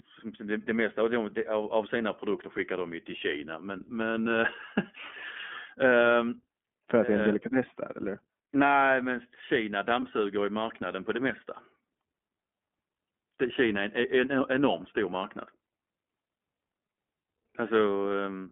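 This is a speech clip carried through the iLBC codec all the way through, and it's plainly audible. The band sits at roughly 200 Hz to 3.4 kHz, so there's nothing up top and not much low end. The voice has that slightly rough, synthetic edge you get when each short frame's excitation is coded on its own. The sound fits iLBC's 15.2 kbps mode with 20 ms frames.

Then there's one stretch of lost iLBC frames, from 10.00 to 10.03 s, a 20 ms gap, so about a single frame's worth of packet loss. The decoder covers the hole by repeating the last pitch cycle with some noise mixed in, which gives a brief held, faintly buzzy vowel. Because iLBC frames don't depend on their predecessors, the speech snaps back straight after.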